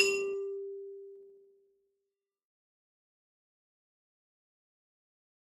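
From start to finish the music has a grainy, rough texture: sustained tones sound noisy rather than clean, and the high end, though full-width, carries a fizzy, coarse quality instead of open detail. The likely cause is Opus compression in its CELT music mode at a low bitrate, something near 24 kbps. Short of bits, the encoder preserves each band's energy but refills the band contents with folded or noise-like material, which gives grit rather than swirling holes.

Between 1.12 and 2.56 s the level drops by roughly 20 dB, and the fade carries a ticking, zipping texture. This is zipper noise: the gain moves in hard steps of about 1 dB, around fifteen a second, with no interpolation between them. Every jump puts a small discontinuity in the waveform, heard as a click, and the run of clicks rides on the music for as long as the fade lasts. Level changes applied smoothly, as a fader would, come through without this ticking.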